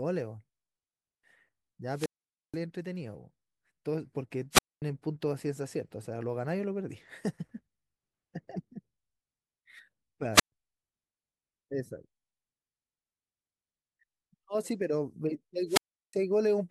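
Speech, interrupted four times by wireless microphone squelch dropout. The FM radio link fades, hiss rises, and the receiver's squelch mutes the output. Gaps occur at 1.92–2.59 s (about 480 ms mute), 4.51–4.82 s (about 240 ms), 10.33–10.52 s (about 125 ms) and 15.67–16.14 s (about 360 ms).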